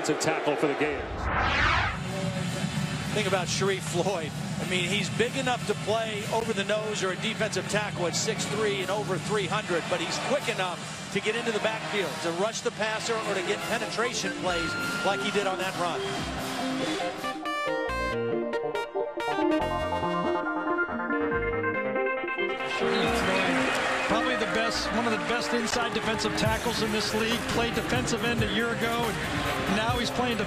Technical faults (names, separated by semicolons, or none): damaged data in a compressed stream